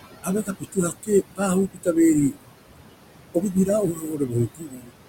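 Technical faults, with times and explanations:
Throughout, noise suppressor artifacts: The room noise, about 10 dB under the speech, is cut by about 21 dB between words. It returns under speech.
0.23–1.41 s, 1.73–1.88 s, 3.34–3.68 s and 3.93–4.92 s, speech cut by the noise suppressor: Quiet speech is mistaken for noise and drops by up to about 19 dB. Soft sounds fade, mostly in the first and last runs.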